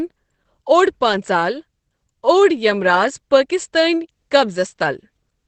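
Speech with heavy Opus compression damage throughout: nothing above 8.6 kHz and a muffled, hoarse sound, likely from the SILK speech mode at a bitrate around 12 kbps.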